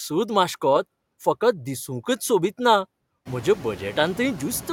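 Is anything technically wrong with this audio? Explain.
Yes. Noise suppressor artifacts run through the whole speech clip. Each frame, bands taken for steady noise are cut by about 18 dB, so the background sinks between words and rises beneath them. A spectrogram shows a patchy, gated noise floor between syllables.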